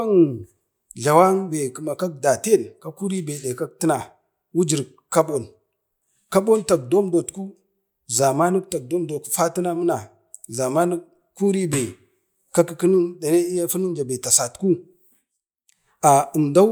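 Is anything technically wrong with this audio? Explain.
No, nothing is technically wrong.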